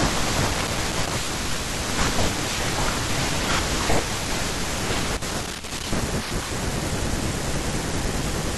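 Loose connector crackle at 0.51–1.12 s and 5.17–5.92 s: an intermittent contact chops the speech into irregular scratchy bursts, seen as ragged dropouts and broadband vertical streaks.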